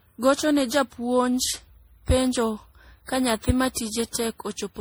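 Generation loss runs throughout the speech: it sounds swirly, smeared and hollow, with blurred consonant onsets. This likely comes from repeated lossy re-encoding, around seven passes, which fits a 64 kbit/s MP3 chain, each pass adding fresh quantisation noise and spectral holes.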